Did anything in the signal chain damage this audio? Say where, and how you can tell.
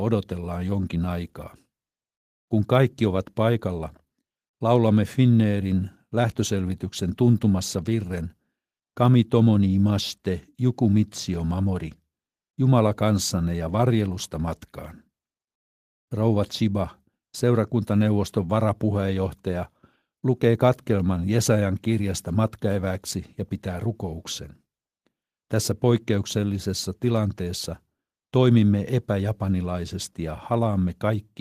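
No, nothing audible in this speech points to damage at any stage of the chain.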